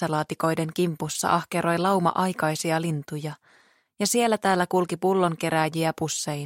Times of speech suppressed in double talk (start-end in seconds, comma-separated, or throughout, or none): none